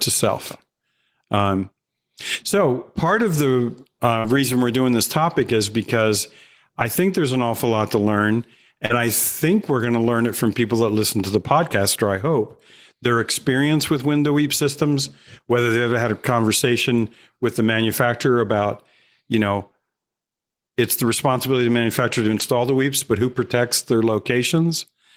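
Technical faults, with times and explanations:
4.19–4.26 s, short concealed packet loss: about 40 ms of audio never arrived, and the decoder extended the preceding sound for 44 ms, leaving a brief smear before real audio resumed.
4.24–4.34 s, lost packet rebuilt from error correction: 60 ms, which fits three 20 ms packets, was replayed from low-bitrate copies carried in the following packets, so there is no gap, only a rougher, noisier patch.
8.86–8.91 s, short concealed packet loss: 40 ms went missing and was covered by 36 ms of continued sound, heard as a short smear or wobble.
8.89–8.99 s, lost packet rebuilt from error correction, between "awful lot to learn" and "think we're going to": 60 ms, consistent with three packets, was rebuilt from low-bitrate backup copies and sounds coarser and noisier than its surroundings.
13.97–13.99 s, lost packet rebuilt from error correction: a single 20 ms stretch, pointing to one lost packet, was played from its reduced-quality copy, giving a brief grainy roughness instead of a gap.
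18.47–18.65 s, lost packet rebuilt from error correction, right after "conversation with the manufacturer": 100 ms, which fits five packets, was decoded from low-bitrate copies, audibly rougher and noisier.
22.23–22.41 s, lost packet rebuilt from error correction, between "responsibility of the manufacturer" and "the weeps but who": 100 ms, again suggesting five packets, was rebuilt from backup copies, and the passage turns rougher and noisier.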